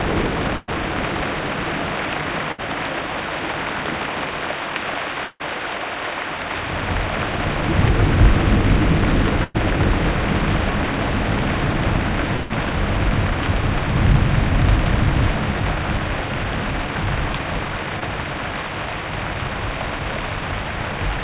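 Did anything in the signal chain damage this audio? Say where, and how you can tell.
Yes, the network stage hurt it in five places: 0.56–0.70 s, 2.52–2.60 s, 5.26–5.42 s, 9.44–9.56 s and 12.36–12.52 s. Each one is a burst of packet loss. The receiver keeps extending the last bit of sound and fading it, so you get a held buzz or a dying hiss. Then the audio picks up further along, with 60 to 140 ms actually gone. The 5.26 s one even fades to about 30 ms of silence before recovering.

There's also a tiny short concealed packet loss at 18.00–18.03 s. Around 20 ms never reached the decoder in time, so the receiver patched the gap by continuing the preceding sound and crossfading back into the real signal. It comes across as a quick smear or wobble rather than a dropout. The whole thing sits on a narrowband call path with nothing above 4 kHz, which fits a G.711-style codec.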